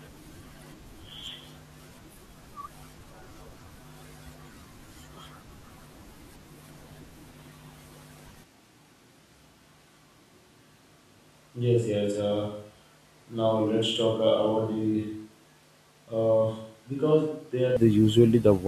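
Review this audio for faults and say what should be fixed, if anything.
From 8.4 s to 17.8 s the speech turns abruptly roomy and hollow, thinner in bass and roughly 10 dB quieter, with faint room noise. This is likely a switch to a distant microphone after the close one dropped out. To prevent it, monitor and record the close microphone on its own track and check its connection and battery before recording.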